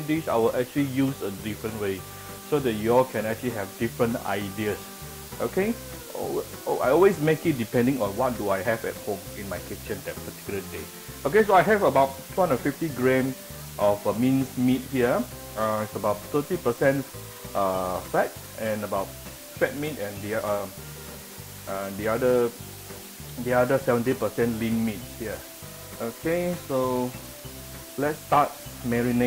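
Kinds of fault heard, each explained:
Low bit depth with dither: The audio has been quantised to very few amplitude steps, with a small random signal added before each sample was rounded, which fits a resolution of around 6 bits. The dither turns what would be gritty distortion into an even, unchanging white hiss that runs through the whole clip. That hiss sits only about 15 dB below the signal, so it is loud and plainly audible while the sound itself stays clean of harmonic distortion.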